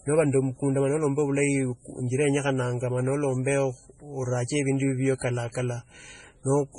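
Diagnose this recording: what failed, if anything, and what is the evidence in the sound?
The codec stage is at fault: the speech has most likely been through heavy MP3 compression, and the damage runs through the whole clip rather than at any one moment. Nothing survives above 10.4 kHz, where the encoder has cut the treble to save bits, and the strain fits a very low bitrate around 24 kbps. Starved of bits, the encoder drops weak frequency lines that flicker between frames, leaving a watery, swirly texture, metallic chirps on sibilants, and smeared consonant attacks.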